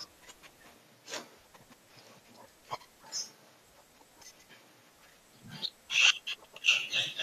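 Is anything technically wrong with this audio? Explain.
Yes. Frames out of order at 1.54–1.74 s, 4.30–4.50 s and 6.35–6.54 s: two adjacent blocks of about 93 ms each, consistent with runs of four frames, were decoded swapped. The speech there flutters, and no time is lost.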